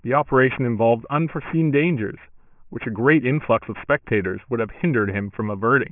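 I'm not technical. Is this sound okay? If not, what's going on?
No. Throughout the speech there is aliasing: the sound was converted to a much lower quality without filtering first, so high sounds above 3 kHz fold back as gritty, false tones.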